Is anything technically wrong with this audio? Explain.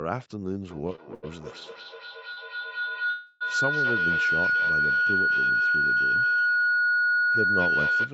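Yes, there are four faults.

From 0.7 s to the end, a feedback howl builds near 1.5 kHz. Two devices share the room, so the microphone keeps picking up the loudspeaker. Each trip adds gain. The tone pulses roughly every fifth of a second and peaks about 7 dB above the speech.

Between 0.87 s and 1.25 s there are repeated stalls, a stutter. Packets kept arriving late, and the jitter buffer kept emptying. The receiver held the last sound four times, about 133 ms in all, with the longest hold 86 ms. Nothing is lost, but the speech drags.

At 2.33 s to 2.39 s there is a short stall from a late packet. One packet missed its slot. The receiver stretched the previous sound for about 41 ms, then resumed where it stopped. A sound lingers briefly, with a slight buzz or dip.

From 3.10 s to 3.43 s the call audio freezes. The sound turns into a fading buzz or hiss for about 303 ms. It never drops to silence. 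Packets were likely held up in transit, emptying the jitter buffer. Playback then resumes without skipping anything.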